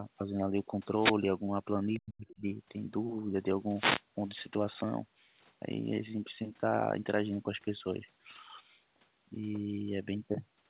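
From 0.99 to 1.15 s a wireless microphone noise hit breaks through as a brief swish of static. The analogue FM radio link fades as reflections cancel the signal, so receiver noise rises over the speech. The same hit returns from 3.76 to 4.02 s.

Around 1.94 to 1.98 s a faint scrap of the other side's voice leaks through, roughly 25 dB below the talker. It is likely loudspeaker playback that the echo canceller left in the microphone signal. A second fragment appears from 2.28 to 2.35 s.

Overlapping this, from 1.96 to 2.45 s, the talker's speech is suppressed in double talk, dipping by as much as around 40 dB over roughly 0.4 s. The likely cause is the echo canceller failing to separate near speech from the echo and turning both down.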